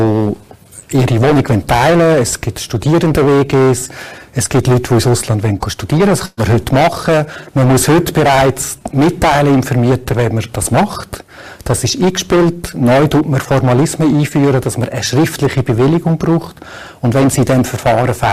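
A harsh fuzz rides every loud passage from start to finish: hard clipping, with the signal driven about 15 dB past its limit so many peaks are sliced flat. At 6.25 s the last sound is carried on and fades before jumping ahead at 6.40 s: a burst of packet loss, about 120 ms concealed by stretching earlier audio.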